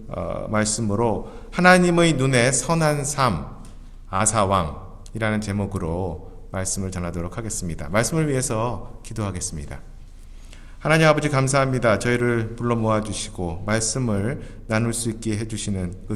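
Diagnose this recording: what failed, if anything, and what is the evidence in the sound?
The network stage failed briefly, causing short concealed packet loss at 4.17 to 4.22 s. About 20 ms of audio never arrived in time. The decoder extended the preceding sound for about 22 ms, then blended back, leaving a short smear or wobble.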